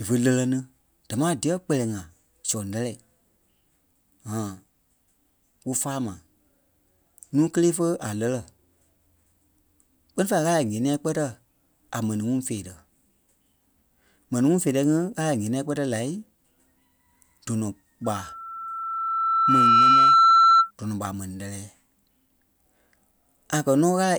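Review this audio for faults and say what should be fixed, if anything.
Loudspeaker feedback squeal from 18.04 to 20.71 s: the microphone re-amplifies the loudspeaker at 1.3 kHz, swelling over about two seconds to roughly 10 dB above the speech. A spectrogram shows one bright horizontal line at 1.3 kHz, and the waveform envelope balloons. Prevent it by lowering monitor gain, moving the microphone away from the loudspeaker, or notching 1.3 kHz.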